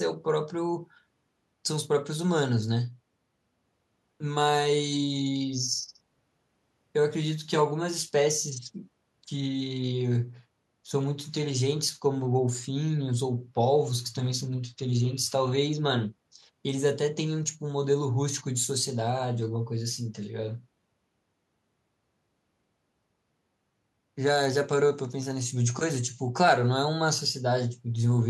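Nothing in the speech recording stood out as a technical problem on listening.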